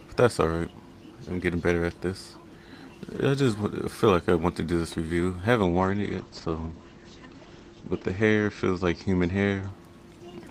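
At 5.65 s there's a call bitrate drop. The bandwidth estimate fell, so the encoder got squeezed to far fewer bits, and what you hear fits a slide from around 32 kbps down to roughly 11 kbps. The top end gets chopped, with the ceiling falling from 20 kHz to 8 kHz, so the sound goes muffled, rough and watery. It sits at its worst for about 2.1 s and climbs back by 9.75 s.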